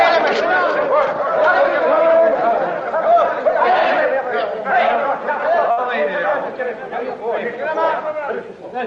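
An everyday sound recording in which, at about 5.71 to 5.80 s, the sound briefly hangs, held too long with a faint buzzy smear. It's a short stall from a late packet: the jitter buffer ran dry, the receiver stretched the previous audio by 60 ms, then resumed exactly where it left off, so nothing is lost but everything after runs 60 ms late.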